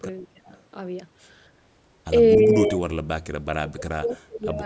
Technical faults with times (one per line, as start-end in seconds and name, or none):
0.22-0.49 speech suppressed in double talk
2.37-3.23 speech suppressed in double talk
3.58-4.62 speech suppressed in double talk